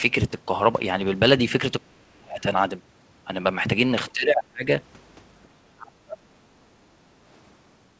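At 1.83–2.44 s, 4.13–4.68 s and 5.76–6.69 s the speech sinks by as much as about 30 to 40 dB. This is speech suppressed in double talk, likely from an echo canceller turning down both its own talker and the loudspeaker echo.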